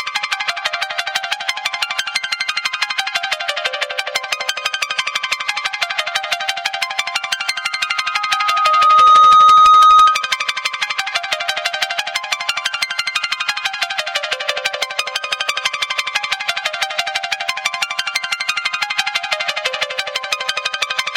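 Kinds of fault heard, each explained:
Loudspeaker feedback squeal: The microphone is picking up its own loudspeaker, and at 1.2 kHz the loop gain passes one. That tone feeds itself. It appears at 7.51 s and swells over about a second and a half. It sits roughly 15 dB above the sound and stops at 10.39 s.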